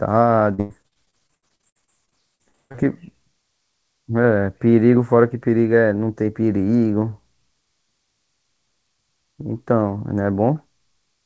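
From 0.54 to 2.80 s, packets kept going missing. This is repeated packet loss (robotic sound). Gaps of up to 146 ms arrive in quick succession, and each is filled by stretching the last sound, so over a third of that speech comes out choppy, with pieces missing.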